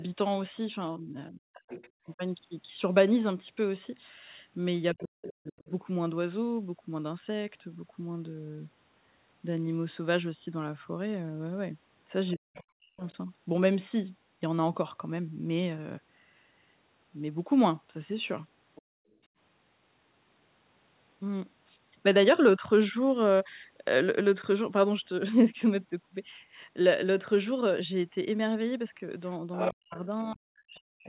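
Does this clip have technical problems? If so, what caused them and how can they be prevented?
Yes. Speech suppressed in double talk occurs at 0.96–5.69 s, 12.35–13.03 s and 29.42–31.07 s, with the speech dipping by roughly 40 dB in pieces totalling about 1.5 s, 0.7 s and 1 s. This is likely an echo canceller that couldn't separate the near talker from loudspeaker echo while both sides spoke, so it attenuated everything. Using a headset, or an echo canceller with better double-talk detection, prevents this.

The other side's voice leaking through is audible at 1.7–5.71 s (roughly 15 dB below the speech), 13.07–13.13 s (about 35 dB below), 18.75–18.82 s (about 25 dB below) and from 29.53 s to the end (only about 5 dB below). Loudspeaker playback was likely picked up by the microphone and not fully cancelled. Headphones or a lower speaker volume would stop it.

Background gated by the echo canceller occurs at 18.82–19.31 s. 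The room sound drops by about 39 dB for roughly 400 ms, right after the leak at 18.75 s, while the canceller clamps the microphone during loudspeaker output. Gentler suppression settings, or headphones that remove the echo, avoid this gating.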